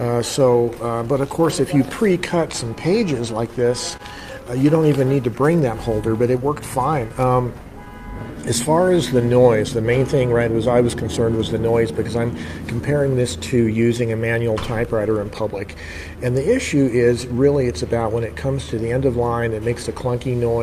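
Clock drift between sender and receiver runs through the whole recording: the sending clock runs roughly 3 percent slow relative to the receiver, so the jitter buffer keeps draining and the receiver must keep stretching what arrives to avoid running dry. On a spectrogram there is no steady broadband damage, only a slight overall slackening of timing. In the waveform, event spacing drifts progressively later against where it should fall.

From 0.04 s to 20.37 s, repeated timing corrections are the visible result of that drift. The receiver repeatedly repeats short pieces, always in the lengthening direction and at irregular intervals, playing material at 97 percent speed and adding a bit under a second in total. By ear this is an unsteady, faintly dragging tempo with occasional small hiccups. A spectrogram shows brief duplicated slices, where a few milliseconds of texture recur side by side, and the waveform shows tiny repeated cycles at the splice points.

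Between 0.51 s and 4.01 s, scattered short gaps appear: about four packets arrived late or went missing, spread across the span. The receiver hid each hole by extending the preceding sound, with the longest patch around 30 ms and the total filled time near 70 ms. They come across as brief smears or ticks. On a spectrogram each is a narrow band of frozen, overly smooth harmonics, and in the waveform a short stretch of suspiciously regular, looped-looking cycles.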